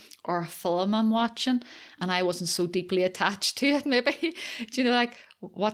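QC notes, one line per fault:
No technical faults are audible anywhere in the signal.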